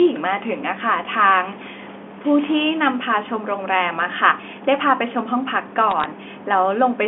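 From 5.91 to 6.05 s, a short burst of sharp ticks and crackle sits on top of the speech, which continues underneath unchanged in its narrow telephone band. These are bit errors on a digital phone line. On this G.711 mu-law link, a small fraction of bits, well under one percent, were flipped. Each flip corrupts a single sample, and hits on the upper bits, or on the sign of loud samples, make the loudest clicks.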